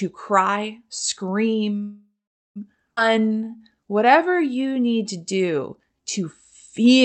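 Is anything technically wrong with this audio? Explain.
Yes, there are three faults, all heard through the call codec's path, which cuts the audio off above about 8 kHz.

Call audio freeze, 1.83 to 2.58 s: packets were likely delayed so the jitter buffer ran dry. The receiver stretched the last sound into a fading tail that dies to silence for about 430 ms of the 722 ms gap. The speech then resumes where it stopped, with nothing lost.

Skip ahead, 2.96 to 2.99 s: a chunk of speech was discarded while later audio was already queued, probably as the buffer shed the delay built up by the freeze. Roughly 300 ms is missing, and the two sides are spliced with only a brief join.

Jitter buffer slow-down, 3.09 to 6.03 s: the buffer was rebuilding its reserve by repeating single pitch periods and slivers of pauses. Speech plays at about 89% speed, with 333 ms added, so sounds are drawn out at unchanged pitch.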